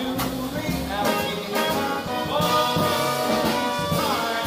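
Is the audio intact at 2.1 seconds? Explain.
No. Between 2.07 and 2.09 s there is a skip ahead: roughly 0.7 s of audio was dropped, either in transit or by an overflowing jitter buffer, while later audio was already queued. Playback jumps forward with no gap, splicing the two sides almost directly together.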